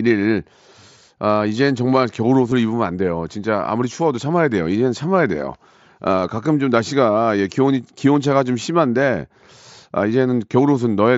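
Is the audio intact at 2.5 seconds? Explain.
No. At 2.51 s there is concealed Bluetooth headset packet loss, about 7.5 ms long. The receiver filled the gap with a best-matching copy of the preceding waveform, which fits a single lost packet. That leaves a barely audible blip rather than the silent gap or click of an unconcealed dropout.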